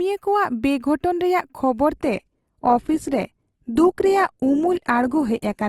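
At 1.97 s the speech abruptly turns duller through to the end, with nothing above 12.1 kHz. This is an adaptive stream at a lower bitrate, consistent with a switch from about 64 to 16 kbit/s Opus. Unlike a dropout, there is no gap.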